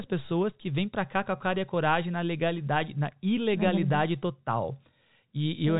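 Nothing goes wrong anywhere in this bit of speech; it simply carries the narrow telephone sound of G.711 coding, with nothing above 4 kHz and the faint level-following hiss that fits a 64 kbps mu-law line.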